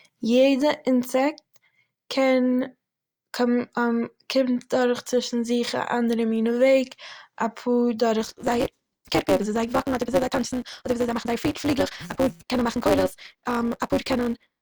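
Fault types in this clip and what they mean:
Block size mismatch (truncated): from 8.2 s to the end, one stage hands over longer blocks than the next stage takes in, which fits a 256-sample read, so each block's tail is dropped. The speech plays 1.88 times faster at roughly normal pitch, under a 188 Hz buzz.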